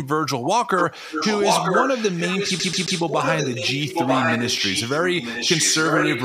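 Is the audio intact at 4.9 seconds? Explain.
No. From 1.1 s to the end, an echo leak returns a delayed copy of the speech about 0.94 s later at roughly equal level, likely from a loudspeaker's uncancelled echo.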